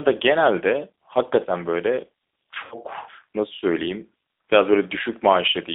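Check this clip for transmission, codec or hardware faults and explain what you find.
Two faults are audible: the whole recording has passed through a low-bitrate G.729 codec, and there is a brief dropout concealed by that codec near the middle.

G.729 codec (throughout): The speech is confined to a telephone band of roughly 300 Hz to 3.7 kHz, and the coding damage is plainly audible. This points to an 8 kbit/s G.729A coder. It rebuilds each 10 ms frame from a vocal tract filter, a pitch predictor and a handful of pulses, which gives the voice its rough, slightly synthetic edge. On a spectrogram, energy stops sharply near 3.7 kHz and thins out below 300 Hz, and harmonics look smeared.

VoIP packet loss concealed by the speech codec (2.65 to 2.76 s): About 60 ms of audio was lost, which fits three consecutive 20 ms packets. The decoder filled the gap by repeating its last pitch and filter settings at decreasing gain. 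The result is a short stretched sound, a buzzy tone or coloured noise, that fades, and the voice stays weak or distorted briefly afterwards because each decoded frame depends on the one before it. On a spectrogram, this appears as a stretched, unchanging pattern in place of normal formant movement. The waveform shows a smoothly decaying envelope.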